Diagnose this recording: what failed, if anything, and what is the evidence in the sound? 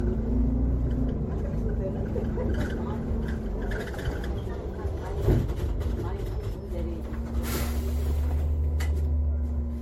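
Codec stage: generation loss throughout, with swirly, hollow, smeared sound, blurred attacks and nothing above 16.5 kHz. Likely several MP3 re-encodes at around 60 kbit/s.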